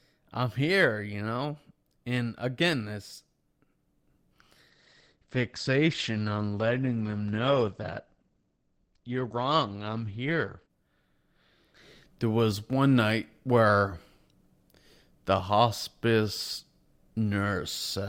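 Adaptive stream at a lower bitrate, from 4.70 to 10.70 s: for six seconds the stream switches abruptly to a leaner encoding, with no gap. Treble vanishes above 8.7 kHz and codec artefacts thicken, a drop that fits a fall from about 64 to 16 kbit/s Opus.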